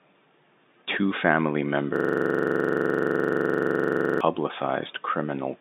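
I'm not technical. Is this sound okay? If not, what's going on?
No. From 1.96 to 4.21 s the speech turns into a rapid, buzzing stutter. This is a system hang loop: the computer or its audio driver froze, and the sound hardware kept replaying the last scrap of audio it was holding. That scrap is about 43 ms long and repeats roughly 23 times a second, 53 times in all, which fits a 2048-sample buffer. The narrow, telephone-like tone, with nothing above about 3.8 kHz, comes from G.711 telephone coding.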